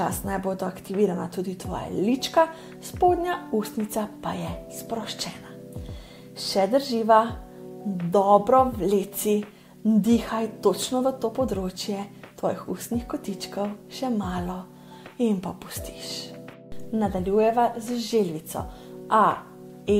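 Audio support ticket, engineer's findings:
No faults found in the audio on review; nothing to report for this ticket.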